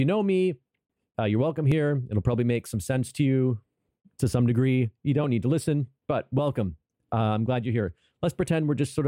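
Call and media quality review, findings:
Regular clicks roughly every 2.14 s, from 1.72 s to 8.15 s, about four in all. Likely clock drift buffer slips between two devices: a clock mismatch of around 700 ppm drops or repeats a small block of samples each time.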